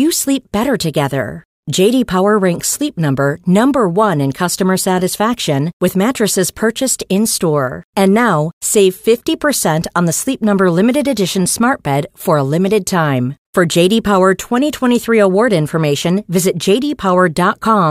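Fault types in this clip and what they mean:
Nothing in this one calls for a label, since there's no audible fault to point at anywhere in the recording.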